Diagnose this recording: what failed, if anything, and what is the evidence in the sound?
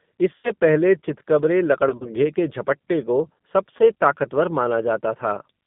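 G.729 codec coding, present throughout, is a codec-stage fault. The sound is band-limited to roughly 150 Hz to 3.6 kHz with a plainly audible rough, synthetic texture. That fits an 8 kbit/s G.729A coder, which rebuilds speech from a vocal-tract filter, a pitch predictor and sparse pulses.

VoIP packet loss concealed by the speech codec is a network fault. It occurs at 0.36–0.51 s, at 1.89–2.10 s as scattered gaps of up to 40 ms, and at 3.77–3.81 s. Each time the decoder stretches its last pitch and filter into a buzzy tone or coloured noise that fades, and the speech stays weak until it recovers.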